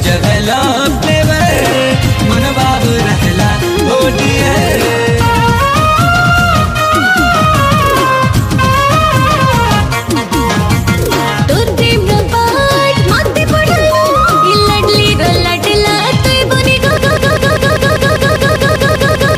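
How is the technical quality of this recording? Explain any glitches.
There's one real problem, and it's at the very end. From 16.97 s right through to the finish, the audio falls into a broken-record loop: a fragment about 198 ms long plays back to back, 12 times over, identical each pass. That's most likely the player, encoder or stream stalling and re-sending the last chunk it had buffered. You hear a rapid stuttering repetition, and whatever should have played in those last couple of seconds is simply gone.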